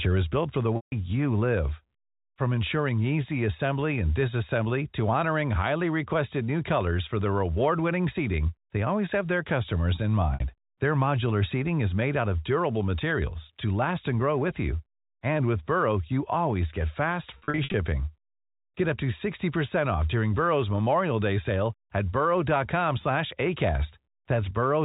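At 0.76 s, after "is built for the", there is packet loss with pitch repetition. The sound holds briefly with a slight buzz, then fades out over about 50 ms into silence for the rest of the 160 ms gap before "you live." The receiver is repeating its last pitch period to fill the gap.

At 6.81 s, after "honoring highly requested new", a bit error spike gives one sharp tick. A single flipped bit makes one sample jump and snap back.

At 10.34 s, a 60 ms loss is bridged the same way, with a brief held buzz.

At 13.11 s, after "made out of durable", there is another bit-error tick. This one spans two samples.

From 17.38 to 17.74 s, losses totalling 220 ms are scattered over 360 ms. No single run exceeds 60 ms, so each gap sounds like a short, buzzy hold.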